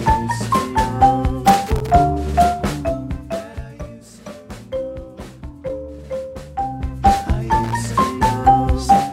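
From 1.47 to 1.90 s, loose connector crackle: a dirty contact chopping the signal, heard as irregular scratching, seen as ragged spikes and broadband vertical streaks. From 2.41 to 3.96 s, zipper noise: a fade of about 15 dB down is applied in unsmoothed steps, a couple of hundred per second, heard as fine ticking. From 6.47 to 7.16 s the same zipper noise accompanies a rise of about 15 dB, showing as a staircase envelope with faint clicks. From 7.63 to 7.88 s, the connector crackle returns briefly.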